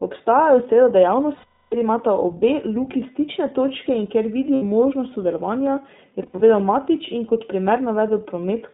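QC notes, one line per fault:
Throughout: iLBC codec. The speech is band-limited to roughly 150 Hz to 3.7 kHz, with plainly audible rough, slightly synthetic texture. The sound fits iLBC at 15.2 kbps with 20 ms frames, each coded independently, so nothing above the narrowband ceiling survives.
1.36 to 1.75 s: lost iLBC frames. A 360 ms gap, which fits 18 lost 20 ms frames, filled by a held, buzzy vowel-like tone that fades before "imata obe luki stične". The decoder repeats the last pitch cycle mixed with noise, and the speech recovers immediately.
4.54 to 4.63 s: lost iLBC frames. An 80 ms dropout between "stične točke in kjer" and "možnost sodelovanja je" is bridged by a brief sustained, slightly breathy tone. That is the concealment repeating the final pitch period, with clean recovery on the next frame.
6.22 to 6.43 s: lost iLBC frames. Just after "možnost sodelovanja je", 120 ms of losses are scattered across about 200 ms, the longest run only a few tens of milliseconds. 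This gives several short buzzy stutters rather than one held tone, each concealed by pitch repetition.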